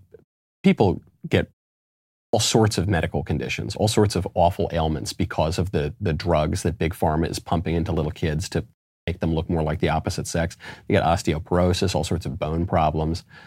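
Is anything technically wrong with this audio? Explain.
Yes, the speech loses its opening after silences. Clipped start after a pause occurs at 0.56 s, 2.25 s and 8.98 s, following pauses of 0.4 s, 0.8 s and 0.32 s. The output path idles during each gap and needs time to wake before passing audio again, so the first 83 ms, 83 ms and 95 ms respectively are swallowed. Each phrase therefore snaps in abruptly without its initial sounds.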